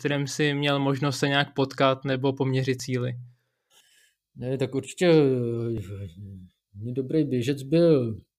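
A speech clip with audio missing between chunks: tiny skips at 2.80 s, just after "nějak potkat nebo poměřit", and at 5.78 s, each dropping a sliver of about 20 ms, likely lost at 3 s chunk boundaries. The waveform shows abrupt splices, and the spectrogram shows thin vertical seams.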